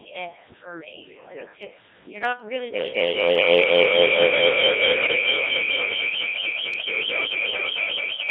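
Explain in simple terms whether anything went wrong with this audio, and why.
Yes, quite a bit went wrong, actually. The whole clip comes through the Codec 2 vocoder, a very low-rate digital radio codec that only sends a rough sketch of the voice (pitch, loudness, tone shape) and rebuilds it from tones. That's why the speech sounds robotic and buzzy from start to finish.

From 2.74 s to the end there's feedback howl. Two devices on the same call are feeding each other, so the sound loops round and gets louder each pass. It narrows into a whistle around 2 kHz, with the loop coming round roughly every fifth of a second, and climbs until it's well above the speech.

Between 5.05 and 5.26 s there are bit errors on digital voice radio. A few corrupted bits scramble the instructions the decoder uses to rebuild the voice, so for that moment the sound jumps around in pitch and tone and turns into warbly, robotic gibberish.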